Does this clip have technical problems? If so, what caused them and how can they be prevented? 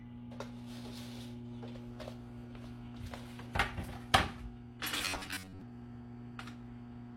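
Yes. Throughout, nothing is heard above 16.2 kHz, with smeared low-bitrate artefacts. This is likely low-bitrate audio saved at a high bitrate, a heavily compressed source re-encoded as a large MP3. Keep the original high-quality source and encode only once.

From 4.97 to 5.61 s the sound turns into a rigid metallic buzz at 93.8 Hz. This is robotic sound from repeated short buffers. Most of that stretch is repeats, which fits a buffer of about 10.7 ms being replayed while new audio arrives too late, likely from overload. Use larger buffers and keep the processing load low enough to deliver audio on time.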